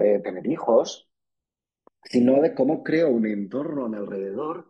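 Channels drifting apart, throughout the speech: the two channels run on clocks roughly 150 ppm apart, so their offset slides to about 0.7 ms, heard as slow flanging.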